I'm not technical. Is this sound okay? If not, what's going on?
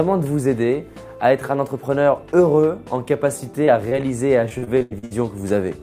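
No. There are two kinds of problem, both caused by parts of the audio arriving too late or not at all during transmission.

Short concealed packet loss happens twice, at 3.65 to 3.69 s and again at 3.89 to 3.93 s. Each time, about 20 milliseconds of sound never arrived. The receiving end filled each hole by carrying the last bit of sound forward, either by continuing its pitch or by filling in with shaped noise, then blended back into the real audio. You hear this as a brief smear or wobble.

Repeated packet loss, which gives a robotic sound, runs from 4.49 to 5.13 s. Within that stretch there are seven separate holes, adding up to about 280 milliseconds of missing sound, and the longest is 81 milliseconds. Each hole is patched the same way, by stretching out the last sound, and then the next hole comes soon after. Nearly half of that stretch is patched-in sound, so it comes across as choppy, with pieces missing.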